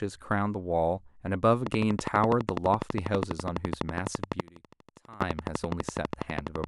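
From 1.67 s to 6.65 s a train of clicks ticks over the speech at a regular 12.1 per second, some seventy in all, peaking about 15 dB above the signal, likely from electrical interference; on a spectrogram they are evenly spaced vertical lines. Between 4.41 s and 5.21 s one channel is inverted, likely a polarity flip, so the summed mono drops by about 22 dB and the speech turns faint; the waveform collapses to a narrow band there.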